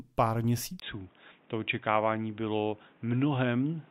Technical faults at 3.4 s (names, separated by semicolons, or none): input switched to a poorer device